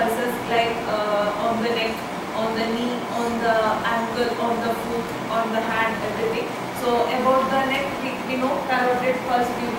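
Computer activity noise runs throughout the clip: a buzzing, chirping texture pulsing at around 70 per second, sitting roughly 20 dB below the sound. Processor or peripheral load currents disturb the audio ground, so the interference tracks the computer's activity rather than the sound.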